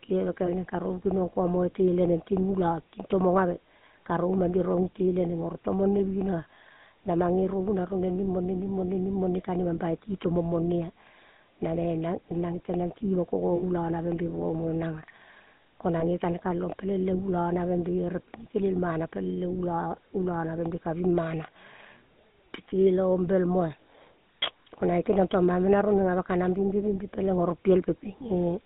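GSM full-rate coding runs through the whole recording. The codec models the vocal tract as a filter and excites it with a regular pulse train that keeps only a sparse subset of excitation samples. This gives the speech a plainly audible buzzy, gravelly roughness, consistent with the 13 kbps full-rate scheme. The line band is confined to roughly 150 Hz to 3.7 kHz, so lows are thin and nothing of the upper spectrum survives.

Lost GSM frames cause three short dropouts, at 0.46–0.49 s, 13.56–13.63 s and 16.00–16.04 s. At each, the decoder had no valid frame and reused the last good frame's parameters. Each gap is heard as a brief rough, metallic ring held over the sound. The first and third fit a single 20 ms frame. The middle one is longer, about 60 ms, pointing to a run of three frames, and its ring lasts audibly longer.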